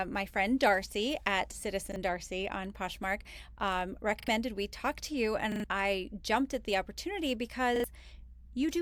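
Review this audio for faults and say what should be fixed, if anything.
Repeated buffer stutters at 1.92, 4.2 (before "we talk to you"), 5.52 (before "I jumped at the") and 7.76 s (after "jumped at the opportunity"): the last 40 ms of speech replays one to three times with hard joins. A dropout would leave silence instead of an echoing fragment. A larger playback buffer would prevent these underruns.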